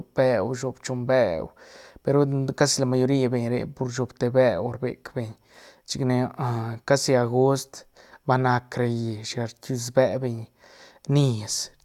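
Listening to the speech recording, nothing stood out as a technical problem at any point.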